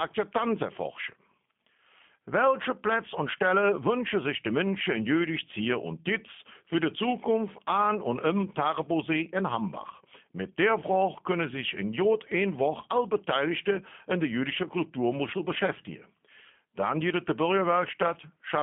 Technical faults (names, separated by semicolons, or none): G.729 codec